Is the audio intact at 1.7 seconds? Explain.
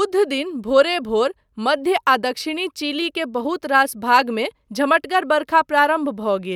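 Yes, the audio is intact at 1.7 seconds, with no dropout, glitch or other fault audible at that point.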